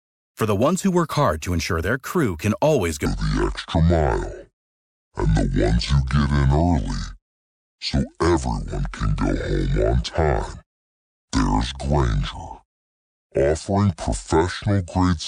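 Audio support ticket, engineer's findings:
Section at the wrong speed, 3.06 s to 15.27 s. Speech drops to 0.597x, deep and dragging, about ten semitones lower. Likely a playback clock mismatch.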